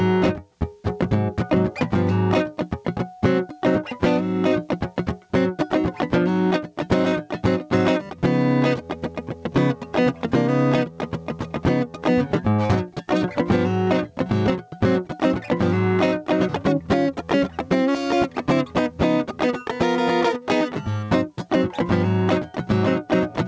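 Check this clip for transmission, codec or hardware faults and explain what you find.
One fault runs through the whole music clip: gain pumping. The level swings by around 10 dB, so the music sounds squashed, with loud and soft parts pressed together. The likely cause is input gain set far too high, with a fast limiter or compressor pulling the level down on every loud moment. The clip also passed through a call codec whose band limit, with nothing above 8 kHz, fits G.722.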